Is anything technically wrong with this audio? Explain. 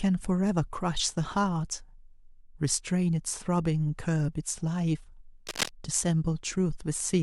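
Yes. From 5.47 to 5.69 s, dense scratches cover the speech, nearly as loud: cable scratch noise, likely a worn contact's resistance jumping as it moved.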